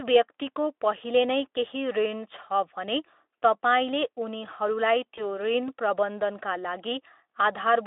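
At 5.15 s comes VoIP packet loss concealed by the speech codec: about 20 ms went missing, and the decoder extrapolated a buzzy tone or coloured noise that fades, unlike a clean dropout.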